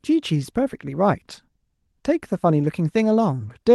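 A single packet of this speech clip was lost at 0.35 to 0.37 s, and the decoder rebuilt the missing 20 ms from the low-bitrate copy carried in the following packet, a lost packet rebuilt from error correction, so there's no gap, just a briefly rougher, noisier patch within the call path's 12 kHz bandwidth.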